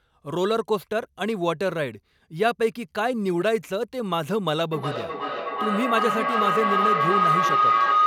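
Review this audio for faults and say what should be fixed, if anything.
A feedback howl runs from 4.72 s to the end at 8.07 s. Two devices in one room share the call, so the microphone-to-loudspeaker loop gains level each trip. It narrows to a tone around 1.5 kHz, pulsing roughly every 0.4 s and peaking about 4 dB above the speech. To prevent it, join only one device per room, or mute the extra device's microphone and loudspeaker.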